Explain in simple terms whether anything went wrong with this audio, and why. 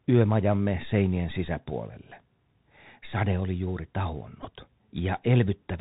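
Through the whole clip the speech goes through a Bluetooth CVSD headset codec, which cuts everything above 4 kHz, makes s sounds scratchy, and leaves a grainy hiss underneath. Around 4.43 to 4.47 s, just after "oli juuri", there's a Bluetooth headset packet repeated: a few packets went missing, so the headset replayed the last one, giving a brief buzz lasting about 15 ms.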